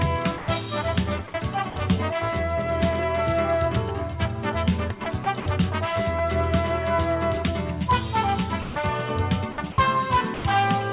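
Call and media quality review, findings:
Sound dropped by the voice detector, five gaps: 0.38–0.48 s (100 ms), 1.28–1.34 s, 1.70–1.76 s (60 ms each), 8.62–8.76 s (140 ms), 10.34–10.44 s (100 ms). Sound gives way to flat, steady noise, then returns abruptly. Likely cause: sender-side voice activity detection misreading low-level sound as background, halting transmission. The receiver then fills with comfort noise. The surrounding audio is band-limited G.711, where nothing reaches above 4 kHz.

Sound chopped by the voice detector, two stretches: 5.04–5.46 s and 9.52–9.78 s. Repeated on-off switching within each, with about 100 ms and 120 ms of sound replaced respectively. Choppy, stuttering texture. Likely cause: voice detector hovering near its threshold, toggling transmission several times and splicing comfort noise between the sent fragments.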